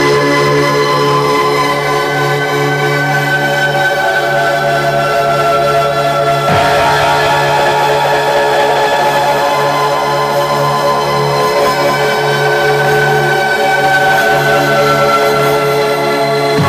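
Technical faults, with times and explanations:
Throughout: wrong sample rate. Everything runs about 1.38 times fast and roughly five and a half semitones high, as if 32 kHz audio were played back at 44.1 kHz.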